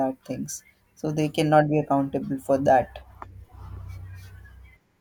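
No technical faults occur at any point in the speech, so there is nothing to place in time order.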